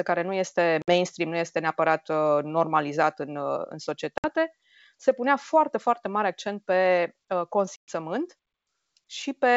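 Speech over a G.722 wideband call, with packet loss on the ADPCM call. Silent, hard-edged holes fall at 0.82–0.89 s after "care nu este", at 4.18–4.30 s, and at 7.76–7.93 s after "mare accent pe uh". They cover about 60, 60 and 120 ms, a handful of packets each. The decoder's predictor drifts from the sender's, so sound returns slightly distorted.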